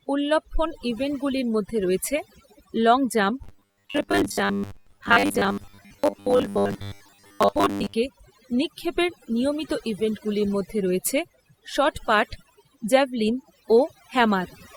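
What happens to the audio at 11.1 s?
At 11.1 s the background around the voice drops and breaks up into twinkling specks. The cause is overdone noise removal, present for the whole clip rather than just this moment. A noise reduction stage set far too aggressively pulls individual frequency bands down or out whenever they sit close to its noise estimate, and the quieter parts of the voice get removed along with the noise.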